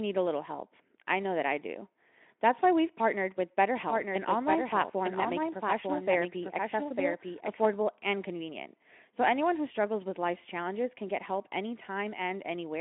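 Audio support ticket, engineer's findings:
Doubled audio track from 3.77 to 7.65 s, right after "why we've partnered with" and clearing before "and convenient". Full-band second copy trails about a second behind, roughly 5 dB down, no decay or room colour, cuts in and out abruptly. Likely cause: a slower second capture path or an edit stacking two offset copies. Sits on the Speex-coded line, band topping out near 3.8 kHz, mild codec roughness.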